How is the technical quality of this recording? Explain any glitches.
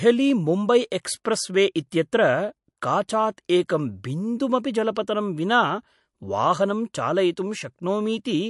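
Technical quality is compromised by plainly audible compression damage that runs through the whole speech recording. From start to finish nothing sounds above 11.3 kHz, and the speech carries a watery, swirling texture with metallic chirps on the s sounds and softened consonant attacks. The likely cause is MP3 compression at a low bitrate, consistent with something around 54 kbps. Short of bits, the encoder cuts off the treble and discards weaker frequency lines, which flicker in and out between frames. A spectrogram would show a hard ceiling at 11.3 kHz and patchy, blotchy gaps in the upper bands.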